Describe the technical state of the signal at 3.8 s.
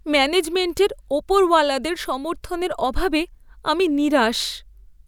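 At 3.8 s the speech signal is intact, with no dropout, clipping, distortion or other fault to be heard.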